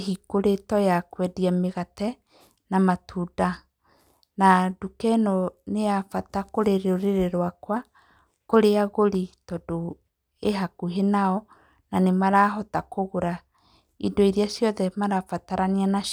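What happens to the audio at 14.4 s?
Nothing goes wrong at 14.4 s; the speech carries on cleanly through that moment with no dropout, click or distortion.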